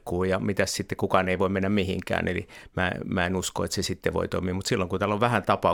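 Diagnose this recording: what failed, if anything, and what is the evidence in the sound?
Nothing failed: the recording gives no evidence of a fault anywhere in the chain.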